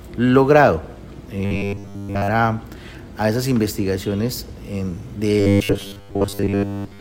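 Robotic sound from repeated short buffers appears from 1.45 to 2.31 s and again from 5.40 s to the end at 7.0 s. Both stretches turn into a rigid, metallic buzz pitched at 100 Hz that only loosely tracks the underlying sound. The likely cause is audio arriving too slowly, so a segment about 10 ms long is replayed to fill the gaps. Most of each stretch is repeated material, and the real audio in between is skipped.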